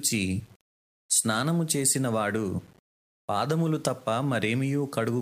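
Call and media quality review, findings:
Low bit depth without dither, whole clip. Grainy, signal-following distortion on the speech; quiet syllables and decays sputter or drop out. Error sits around 35 dB below the signal, which fits 8-bit rounding. Likely cause: a requantising stage without dither. Unlike dithered hiss or codec noise, the grit vanishes in gaps and changes with the voice instead of forming a steady floor.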